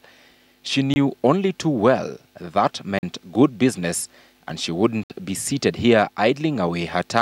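The playback program probably failed to fill its output buffer in time on three occasions, and each failure left a block of digital silence in the audio. The sound drops abruptly to silence and returns with no fade. The holes fall at 0.94 s (about 21 ms), 2.99 s (about 43 ms) and 5.04 s (64 ms), about two seconds apart and growing longer, which fits whole multiples of a 1024-sample buffer.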